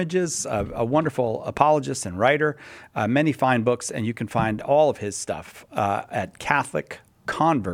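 At 1.57 s there's a loud pop, a single sharp thump lasting about 25 ms, through to 1.60 s. It jumps out well above the surrounding level, something like 10 dB over the signal, while the sound keeps going underneath without a break. What you're hearing is a sudden voltage step or spike riding on top of the audio, most likely from a plug being seated, a switch being thrown or a static discharge, briefly shaped by the circuitry downstream.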